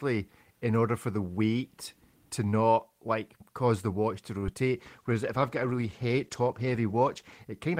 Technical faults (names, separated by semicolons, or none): short stall from a late packet; short concealed packet loss; call bitrate drop